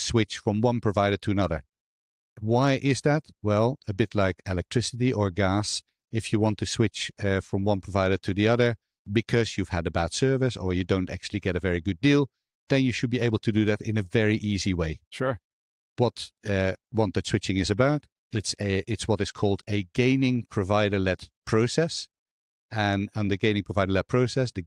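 No technical faults can be heard anywhere in the recording.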